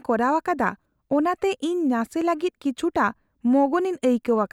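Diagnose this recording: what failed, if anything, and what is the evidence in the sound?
Nothing failed in this recording; the sound gives no evidence of any fault.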